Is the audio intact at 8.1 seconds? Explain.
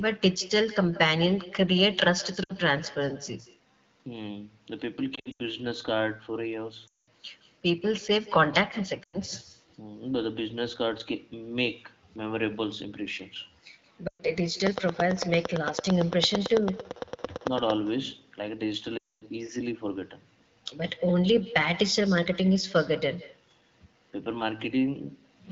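No. At 8.1 seconds, as throughout the whole clip, the speech carries an echo with no canceller: the far end's loudspeaker feeds its microphone and nothing removes that leak, so each phrase returns about 150 ms later, roughly 19 dB down and thinner. On a waveform every burst trails a faint delayed copy; a spectrogram shows ghost harmonics offset just behind each syllable. The AMR-WB codec at 12.65 kbit/s keeps the speech itself clear.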